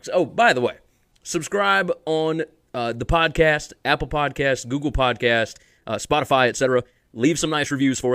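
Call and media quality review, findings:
Time-stretched section, 5.50–8.14 s: speech abruptly rushed at 1.47x pace, pitch unchanged. Likely a length-fitting stretch dropping short segments.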